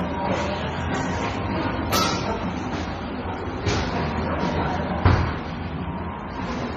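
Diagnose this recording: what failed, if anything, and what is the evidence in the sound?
Transcoding between lossy codecs runs throughout the whole clip, at the codec stage. Nothing is heard above about 14.4 kHz, and the sound carries two overlapping layers of artefacts: a smeared, swirly coarseness together with a brittle, synthetic sheen in the highs. The likely chain is a low-rate MP3 near 32 kbit/s re-encoded to HE-AAC near 24 kbit/s. The second encoder spent its scarce bits reproducing the first one's damage and added its own, and the lower band limit persisted.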